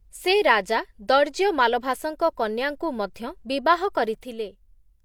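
One channel drops out at 4.23 s, after "ମାଲଭାସଙ୍କ କନ୍ୟାଙ୍କୁ ମଧ୍ୟ ବିବାହ": the speech abruptly falls about 6 dB until the end, likely one stereo side lost before mono summing.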